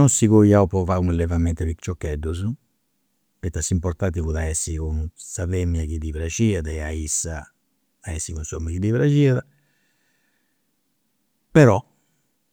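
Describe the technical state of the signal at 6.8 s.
At 6.8 s the speech signal is intact, with no fault audible at that moment.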